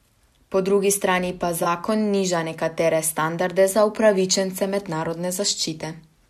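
A speech recording with one corrupt frame concealed, a brief disturbance in the sound from 1.63 to 1.67 s, about 36 ms, which fits a single damaged AAC frame. The decoder detected flipped bits, discarded that frame and filled the gap. On a spectrogram it shows as a narrow vertical band of thinned or smeared energy.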